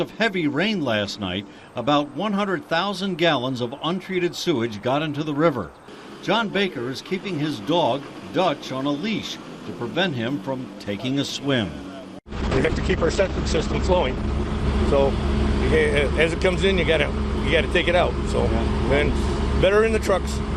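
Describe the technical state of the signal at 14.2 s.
A call bitrate drop spans 12.37 to 15.97 s. The encoder got far fewer bits, which fits about 9 kbps. Sound turns rough and muffled, cut off above 8 kHz.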